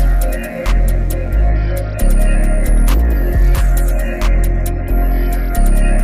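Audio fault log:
0.00–1.50 s mains buzz: a raspy, steady buzz tied to 60 Hz mains sits about 35 dB below the main sound and then stops. Sharp switching spikes leak in twice per mains cycle, so the buzz repeats 120 times a second with a dense ladder of harmonics reaching several kHz. That bright, gritty edge sets it apart from plain hum, which is a smooth, dull tone near the mains fundamental with few overtones.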